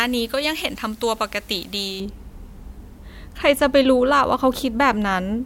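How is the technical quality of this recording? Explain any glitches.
The recording has one clear glitch, at the start. From 0.0 to 2.0 s the speech sounds thin, bright and hissy on sibilants. That is pre-emphasis left on: treble boosted before transmission was never cut back. It leaves about 11 dB of excess at 10 kHz relative to 1 kHz, which fits a J.17 curve.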